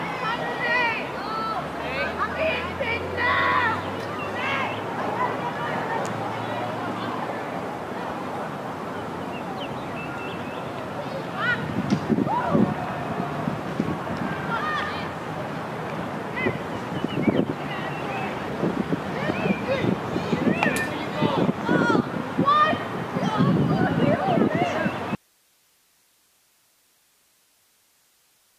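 At 25.15 s the sound cuts out abruptly, an audio dropout to a faint residue. Only hiss remains, roughly 35 dB below the signal, through to the end. The wanted signal was likely lost upstream while the path stayed live.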